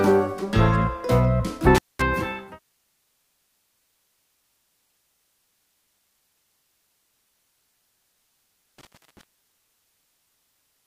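At 1.75 s and again at 8.78 s there is an intermittent contact. A loose plug or cable briefly opens the circuit. The sound drops out for 0.21 s, then 0.32 s, with crackle at each edge and faint hiss in the gap.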